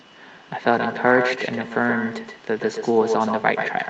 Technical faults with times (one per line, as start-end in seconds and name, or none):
0.00-3.90 echo with no canceller